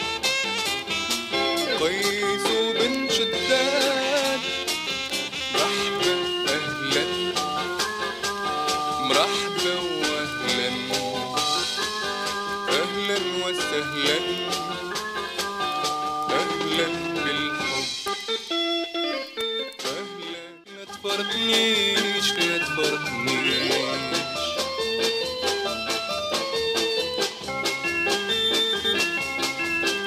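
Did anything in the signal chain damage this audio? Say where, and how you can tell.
No, nothing in the signal chain damaged this audio.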